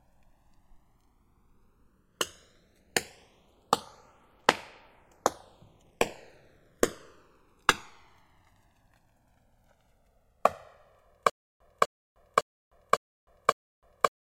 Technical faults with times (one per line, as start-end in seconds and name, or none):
0.00-14.29 channels drifting apart
11.30-14.29 stutter with silent gaps